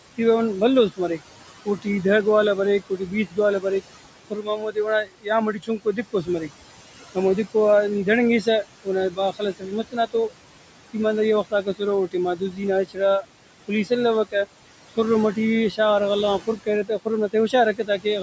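Throughout the clip, the room noise, about 15 dB below the speech, sinks between phrases and swells back under them. These are noise suppressor artifacts: the suppressor pulls noise-like bands down by about 18 dB frame by frame.

Within 0.9–1.86 s, 2.9–3.64 s, 4.3–6.5 s, 8.43–10.32 s, 10.93–14.34 s, 14.97–15.79 s and 16.4–18.06 s, soft consonants and word endings sound swallowed, dipping by up to about 19 dB. This is speech cut by the noise suppressor, which treated those quiet parts as noise. The losses are heaviest around 4.3–6.5 s, where about a second of speech is affected.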